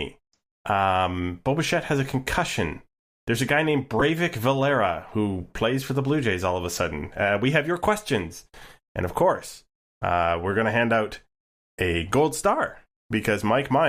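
Right after "a guy named", at about 3.99 to 4.02 s, there's a corrupt frame decoded. Some bits in a compressed frame got flipped, and the decoder played it anyway. The misread gains and codes dump energy in the wrong frequency bands for about 30 ms, which fits a single damaged frame. You hear it as a quick glitch, a chirp, squeak, blip or burst of noise, cutting across the speech, peaking somewhere around -10 dBFS.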